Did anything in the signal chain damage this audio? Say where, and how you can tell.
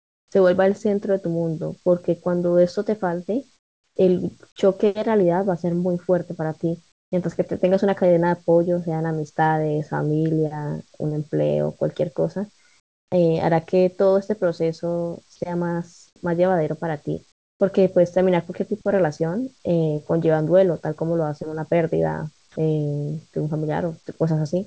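Yes, at the call-processing stage, where discontinuous transmission on the sending side gated the audio.

Comfort noise in place of the background appears at 0.00–0.32 s, and again within 3.56–7.12 s (about 600 ms) and 12.80–17.60 s (about 680 ms). In these stretches the room tone turns into a smooth, featureless hiss with no texture. In the opening section it sits about 16 dB below the real background, which is itself about 41 dB under the loudest speech. The likely cause is the sender's voice detector stopping transmission and the receiver synthesising noise to fill the gap.

The onset is clipped by the voice detector at 0.29–0.32 s, 3.94–3.96 s and 16.14–16.16 s. Each time, speech resumes out of the synthetic noise with a hard edge. Its soft attack is missing, 30 ms in the first case and 20 ms in the other two. This is likely because the detector was slow to register returning speech. 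Those first milliseconds were never sent, and comfort noise played in their place.

Sound is dropped by the voice detector at 22.52–22.56 s. A stretch of speech gives way to steady noise for 40 ms, of which about 20 ms of actual speech is lost, and then the speech picks up again. The likely mechanism is the detector misjudging the speech as background and briefly gating it. The G.722 path at 64 kbps, with its 8 kHz top end, carries the rest of the speech.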